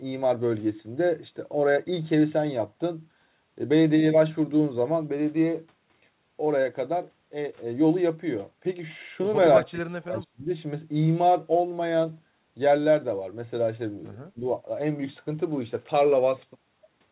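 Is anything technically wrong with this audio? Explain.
Yes. Speech is suppressed in double talk twice. From 9.6 to 10.49 s the speech sinks sharply, by about 30 dB at its deepest, and stays affected for most of that stretch. From 14.34 to 14.44 s there is a short dip of about 15 dB. The likely cause is an echo canceller facing two talkers at once. It cannot separate this speech from loudspeaker echo, so it turns both down together.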